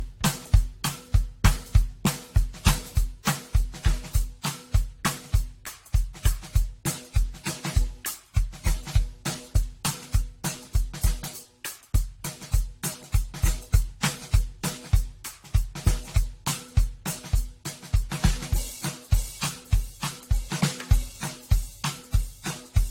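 A music clip with generation loss throughout: swirly, hollow and smeared, with blurred attacks and nothing above 16.6 kHz. That is more damage than one low-bitrate pass would give, likely from about four rounds of lossy encoding, consistent with AAC-LC around 64 kbit/s.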